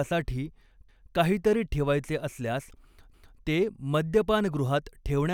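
Overlapping chunks at 0.89 to 1.14 s, just before "काहीतरी ठेवायचे असल्यास ते", and 3.14 to 3.39 s, after "काहीतरी ठेवायचे असल्यास": each 2 s block restarts early, replaying 250 ms as a stutter.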